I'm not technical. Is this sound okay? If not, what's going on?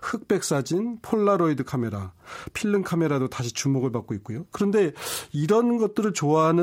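Yes, this recording sounds fine, with nothing wrong to point out. There are no dropouts, clicks, distortion or other glitches anywhere in it.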